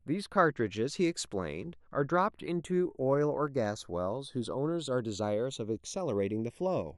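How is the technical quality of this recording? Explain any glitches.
The recording has two faults: a slow flanging across the whole speech clip, and a brief cluster of ticks a little past the midpoint.

Channels drifting apart: throughout, the sound has a slowly sweeping flange when heard in mono. The two channels come from devices on separate clocks, off by around 70 ppm, so the delay between them creeps up to about 0.4 milliseconds, dragging comb-filter notches through the spectrum.

CD scratch ticks: from 3.48 to 3.83 s there are three small ticks, each a few milliseconds at most. A scratch destroys more data than error correction can rebuild once per disc revolution, so the player interpolates or mutes those samples, producing these regular clicks.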